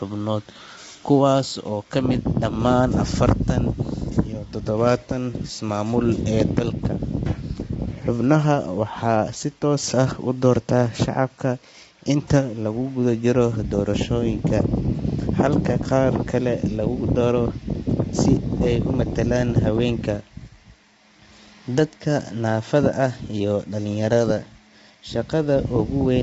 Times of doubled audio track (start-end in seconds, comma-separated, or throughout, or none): none